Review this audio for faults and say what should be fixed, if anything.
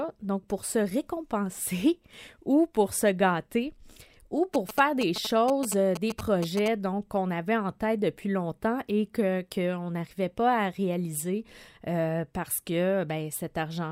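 GSM signalling bursts, 4.54 to 6.68 s: galloping ticks and short buzzes repeating at 217 Hz, roughly 10 dB below the speech. A nearby 2G phone is exchanging brief radio bursts with the network, and the audio circuitry rectifies that RF into audible sound. To prevent it, keep mobile phones switched off or well away from microphones, cables and preamps while recording, and use shielded, balanced cabling.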